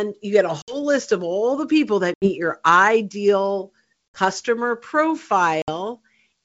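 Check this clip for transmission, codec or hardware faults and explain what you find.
Packet loss on an ADPCM call shows up four times: at 0.62, 2.14, 4.14 and 5.62 s, losing about 60, 80, 60 and 60 ms, each a few packets' worth. The gaps drop to hard silence, and the decoder's predictor and step size lose track of the sender, so the speech comes back slightly distorted before settling. The G.722 wideband coding underneath sounds clean, consistent with full-rate 64 kbit/s.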